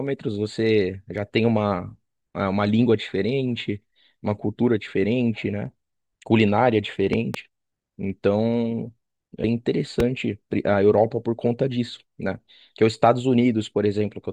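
A speech clip with loud pops and one burst of damaged compressed data. The first loud pop is a pair of sharp hits between 7.13 and 7.37 s, around 10 dB above the speech. A second, single pop follows from 10.00 to 10.02 s, stronger at around 15 dB. Both sit on top of the speech, which carries on beneath them. They are likely voltage spikes from a plug, switch, static discharge or driver glitch entering the signal path. The later stages shape each spike. At 9.43 s there is a brief blip from damaged data in the compressed stream. Bytes in one stretch of the file were corrupted. The decoder misread that frame, lost sync and hunted for the next valid header. That produces the brief glitch heard there.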